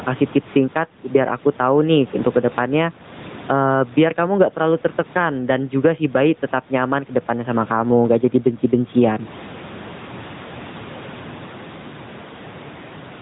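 Gain pumping runs through the whole speech recording: the level swings by around 15 dB, with the room noise about 34 dB below the speech. This is likely a far-too-high input gain being pulled down by a fast limiter or compressor. AMR narrowband mobile codec damage is also plainly audible from start to finish: nothing passes above 3.8 kHz, and the pulse-driven vocal tract model leaves a synthetic coding character that fits a mid-rate mode near 10 kbps. The call's microphone processing trims the lowest bass, as expected.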